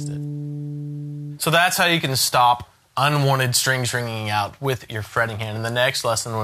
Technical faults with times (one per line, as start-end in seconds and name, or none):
none